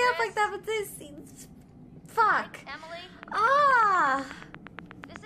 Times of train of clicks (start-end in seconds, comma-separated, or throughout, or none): 3.23-5.17